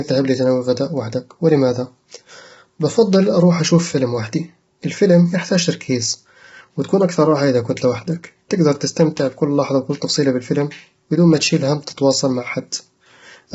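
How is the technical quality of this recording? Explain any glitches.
Technical quality is poor: the speech sounds rough and grainy from start to finish, with a hiss-like fizz between the harmonics and nothing above about 7.7 kHz. The likely cause is heavy low-delay AAC compression (AAC-ELD), whose short frames resolve pitch poorly, consistent with a bitrate near 16 kbps.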